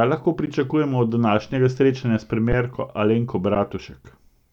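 The output buffer ran dry three times, at 0.46 s, 2.52 s (just after "današnjega srečanja s") and 3.55 s, and each time the converter held its last sample value until data came back. The speech waveform freezes flat for about 13 ms, then 10 ms, then 10 ms, a brief dropout with little click at onset. No audio was lost, so playback resumes where it stopped and each underrun with held sample ends softly.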